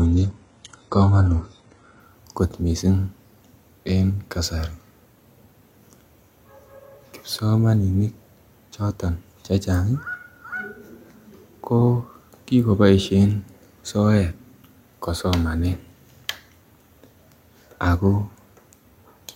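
For the first 2.0 s the speech sounds dull and smeared, with thin or synthetic-sounding treble and nothing above about 11.1 kHz, then clears suddenly without a gap. This is an adaptive stream starting at a low bitrate, consistent with roughly 12 kbit/s HE-AAC stepping up to 96 kbit/s AAC-LC.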